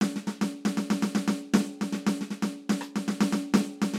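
There are no technical faults to describe in this music clip.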